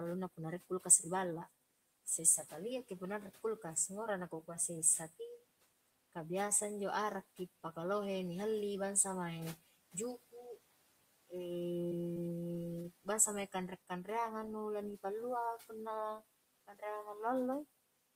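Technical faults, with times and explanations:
11.89 to 12.44 s, repeated packet loss (robotic sound): six short gaps, the longest 23 ms, each patched by extending the preceding sound, so about 19% of this half second is synthetic and choppy. A spectrogram shows repeated, smeared harmonic stretches with abrupt joins.
12.82 to 12.86 s, short concealed packet loss: about 20 ms never arrived in time and was filled by continuing the previous sound, then crossfaded back, just before "bangsa mae". It registers as a brief smear or wobble, seen as a tiny blurred patch in the spectrogram.
16.67 to 16.83 s, speech cut by the noise suppressor: right after "pallua punna", the suppressor mistook speech for noise and pulled it down by about 15 dB over roughly a tenth of a second, so the speech there sounds swallowed. The waveform shows a sudden dip in envelope, and the spectrogram thins out there.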